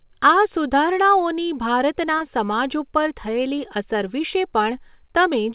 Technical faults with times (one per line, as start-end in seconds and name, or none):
2.18-2.23 short concealed packet loss